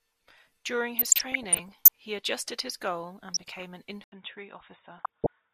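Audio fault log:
0.97–1.88 s, 3.32–3.63 s and 4.98–5.33 s: DAB burbling. Bursts of short noise blips ride over the speech, worsening with each burst. Bit errors slipping past error correction corrupt individual sub-bands frame by frame. Unlike dropouts, the sound never vanishes. Isolated bands carry short noise blips instead.
4.04 s to end: input switched to a poorer device. After an 80 ms silence the speech turns dull and boxy, with nothing above 3.8 kHz, drops about 5 dB, and gains a faint new noise floor. The cause is likely a change of microphone. Unlike a filter, tone, level and noise all shift together.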